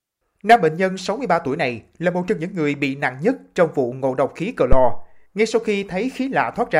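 A deep thump at 4.72 s, peaking at about -1 dBFS and decaying in 90 ms: a phantom power thump from supply switching on a live input.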